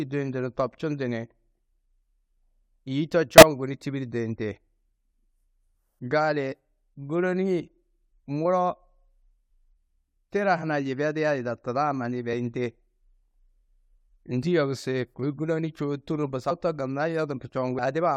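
At 3.38 to 3.43 s a loud burst of chirpy noise, peaking around -5 dBFS, cuts across the speech. This is a corrupt frame decoded: damaged bits in a couple of compressed frames were played anyway, so misread gains and codes scattered energy across wrong frequencies.

At 8.42 to 8.45 s, then at 16.5 s and 17.78 s, the speech lurches forward at each join. These are compressed frames skipped, losing roughly 20 ms, a tenth of a second and 150 ms of audio.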